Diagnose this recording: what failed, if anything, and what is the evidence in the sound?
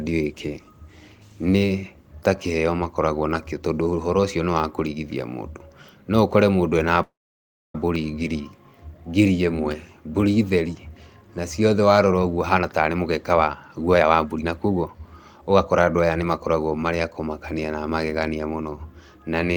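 A call audio freeze at the network and jitter buffer stage, likely from packets held up in transit: from 7.02 to 7.75 s the speech stops, a brief fading continuation gives way to about 0.63 s of silence, and then it resumes where it left off. That inserts a 0.72 s gap with nothing missing.

A jitter buffer speed-up follows as the receiver sheds the built-up delay. From 12.55 to 16.64 s the speech plays at about 117% speed without any pitch change, because short pitch-period slices are repeatedly cut out, roughly 0.7 s in all, so it sounds hurried.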